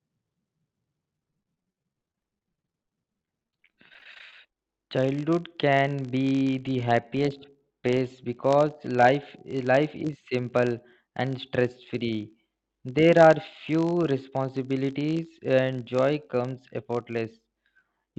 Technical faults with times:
0.00-18.18 filter restarted on every block
1.13-4.69 repeated packet loss (robotic sound)

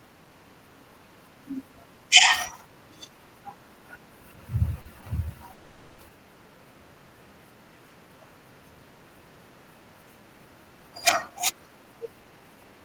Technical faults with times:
4.81-5.03 short stall from a late packet
5.54-6.00 call audio freeze
11.29-12.81 jitter buffer speed-up

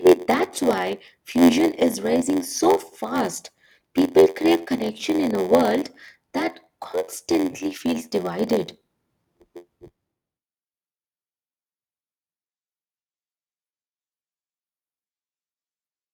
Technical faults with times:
0.00-16.13 block size mismatch (padded)

